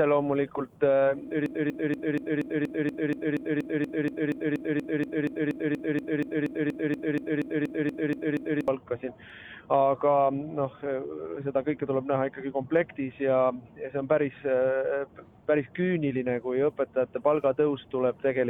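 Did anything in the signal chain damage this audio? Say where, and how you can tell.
Yes. From 1.46 s to 8.68 s a broken-record loop takes over: a fragment about 0.24 s long repeats exactly, back to back, 30 times, and whatever belonged in those seven seconds never arrives. This is likely a stalled buffer at the player, encoder or stream stage, replaying the last block it held. Unlike a brief stutter or an echo, each repeat is identical and undecayed, and the loop persists for seconds.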